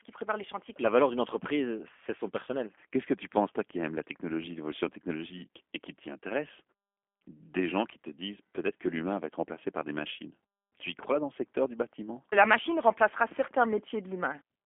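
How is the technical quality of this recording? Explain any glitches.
Technical quality is limited by low-bitrate telephone coding across the whole clip; the speech stays intelligible, but the damage is plainly audible.

G.729 codec, throughout: the speech sounds rough and slightly synthetic, as if rebuilt rather than recorded. That fits an 8 kbit/s codec that models each 10 ms frame with a vocal-tract filter, a pitch predictor and a few pulses. On a spectrogram, energy sits in a band from about 250 Hz to 3.4 kHz, with a hard ceiling and smeared, grainy harmonics.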